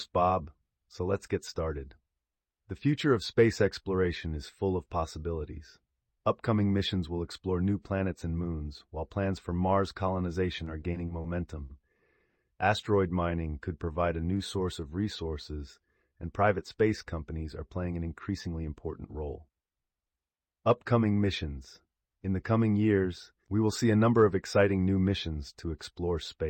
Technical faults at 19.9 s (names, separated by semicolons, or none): jitter buffer speed-up